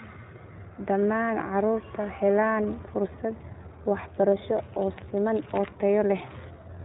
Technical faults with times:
0.00-6.85 iLBC codec

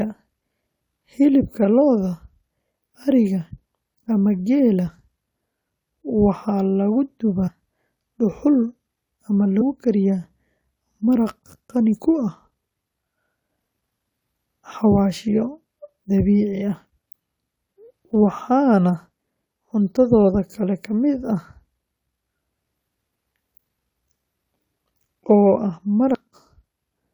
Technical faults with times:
7.47-7.49 compressed frames skipped
9.60 compressed frames skipped
26.13 compressed frames skipped

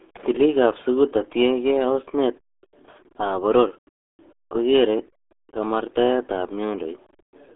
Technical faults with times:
0.00-7.55 RealAudio 14.4 codec

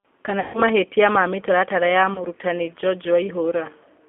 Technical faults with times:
0.00-4.09 G.729 codec
0.40-0.63 VoIP packet loss concealed by the speech codec
2.14-2.24 VoIP packet loss concealed by the speech codec

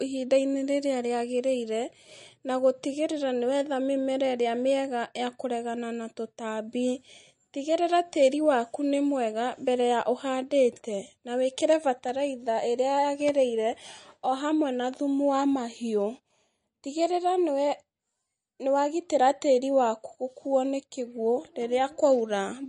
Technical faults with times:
0.00-22.68 MP3 compression

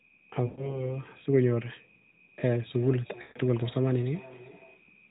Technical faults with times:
0.46-0.88 lost AMR speech frames
2.66-4.88 feedback echo between two devices
3.22-3.38 lost AMR speech frames

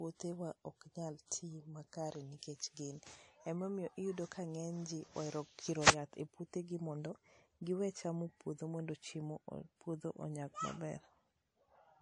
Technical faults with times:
0.00-12.02 transcoding between lossy codecs

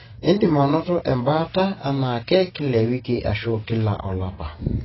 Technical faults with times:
0.00-4.84 AAC compression

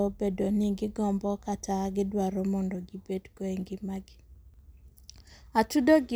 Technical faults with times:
none

